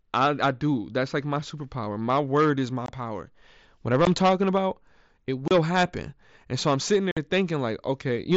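Unconcealed Bluetooth headset packet loss punches holes at 2.86–2.89 s after "word is my", at 4.05 s before "talking about it", at 5.48–5.51 s after it, and at 7.11–7.17 s. Lost headset packets were replaced by silence or an idle pattern, heard as abrupt dropouts and seen as short gaps in the waveform and spectrogram.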